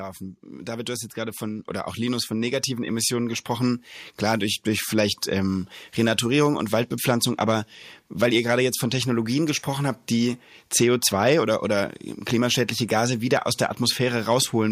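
Hard clipping runs through the whole speech clip. The signal is driven about 5 dB past what one stage can carry, so the loudest peaks are sliced flat. Only a small fraction of the waveform is affected, roughly a third of a percent. Those flat tops create harmonics high in the spectrum. The result is brief crackle and grit on the strongest syllables rather than a constant fuzz.

At 1.59 s the microphone volume is stepped up. The call software judged the input too quiet and raised the device level in a single move of about 4 dB. Voice and background noise both jump louder at that instant, with no fade.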